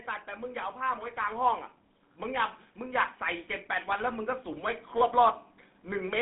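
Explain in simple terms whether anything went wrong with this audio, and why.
The speech passed through the old GSM full-rate codec used on early mobile phones, which rebuilds the voice from a rough model and throws detail away. Nothing above about 3.8 kHz survives, so the speech sounds narrow, muffled and noticeably buzzy and gravelly all the way through.

From 3.84 to 4.78 s, the automatic gain control decided the sound was too quiet and turned its volume up gradually. The voice and the background noise swell together over that stretch.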